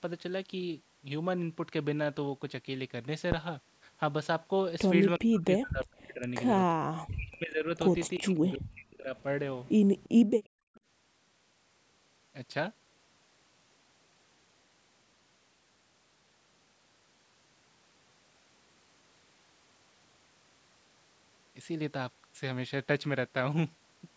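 At 3.32 s and again at 7.97 s there is a phantom power thump, a deep low-frequency knock as a supply step is pushed through the input's coupling capacitors. Each decays within about 21 ms. A waveform shows a single large offset swing, and a spectrogram a brief dark smear at the very bottom.

From 5.19 to 6.24 s, 6.74 to 7.72 s and 8.18 to 9.15 s the talker's level sinks hard, by something like 40 dB at its deepest, and the sound turns faint and broken. This is likely speech suppressed in double talk, with the echo canceller attenuating the near end while the far end was also active. The envelope shows hollowed-out stretches, and the spectrogram thins to near silence in those spans.

Short echo leak scraps appear at 9.65 to 9.72 s, 9.98 to 10.09 s, 10.44 to 10.48 s and 10.74 to 10.80 s. They are faint copies of the voice trailing 352 ms behind it, some 30 to 40 dB down, likely from residual loudspeaker echo the canceller failed to remove. 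A spectrogram shows them as dim, delayed repeats of earlier patterns.

Between 10.48 and 10.74 s the background is gated by the echo canceller. The room tone falls by about 35 dB and then returns, as the canceller clamps the microphone while the loudspeaker plays. The noise floor shows a notch in both the waveform and the spectrogram.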